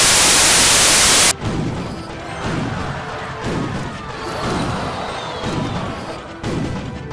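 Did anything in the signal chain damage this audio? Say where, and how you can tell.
Yes. The damage is at the storage and file-reading stage: the opening 0 to 1.31 s is a hard-edged blast of very loud white noise. That's file tags played as audio. An embedded cover picture's compressed bytes got decoded as samples, so it comes out as pure static.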